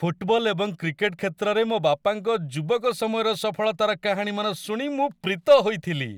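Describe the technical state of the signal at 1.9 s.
At 1.9 s the speech signal is intact, with no audible fault or technical defect at that moment.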